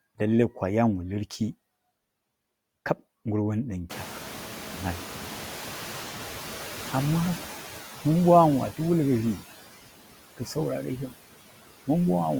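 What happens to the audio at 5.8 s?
At 5.8 s the noise suppressor is catching up, between 3.89 s and 7.54 s. The room noise jumps sharply at around 4 s, and the suppressor's noise estimate trails it by about 3.7 s. The louder noise therefore comes through with only about 7 dB of reduction before settling lower as the estimate adapts. Noise suppressor artifacts are also present here, as throughout the clip. Cutting the noise by about 10 dB frame by frame leaves it sinking between words and rising beneath them.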